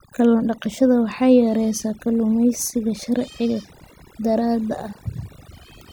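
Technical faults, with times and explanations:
Throughout, overdone noise removal: the noise reduction was pushed too hard, so individual frequency bands sitting near its noise estimate are cut away, taking the softer parts of the speech along; the background drops and breaks up into twinkling specks.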